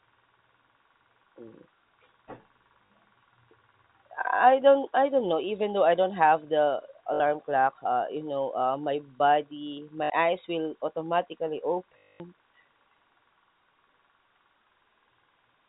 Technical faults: packet loss with last packet repeated

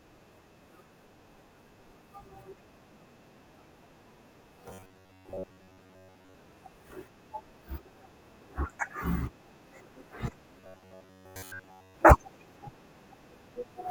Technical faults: robotic sound from repeated short buffers

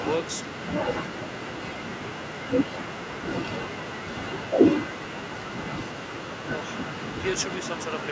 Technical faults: speech suppressed in double talk

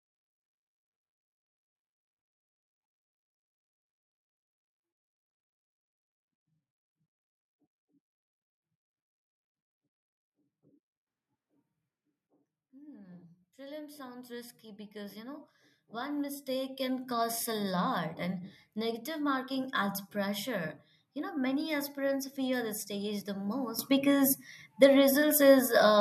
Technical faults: sudden gain jump; automatic gain rising

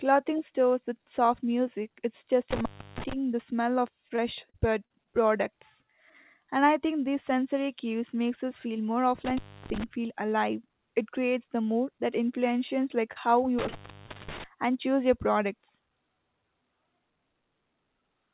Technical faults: intermittent contact; repeated packet loss (robotic sound); short concealed packet loss

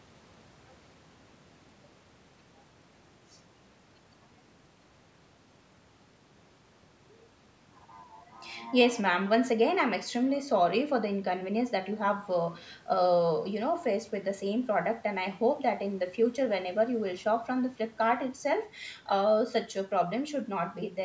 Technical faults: none

